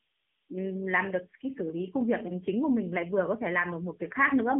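AMR narrowband mobile codec damage runs through this whole speech clip: nothing passes above 3.8 kHz, and the voice sits in a thin 150 Hz to 3.5 kHz band, plainly buzzy and synthetic, which fits a low mode near 8 kbps rebuilding the voice from a sparse vocal-tract model.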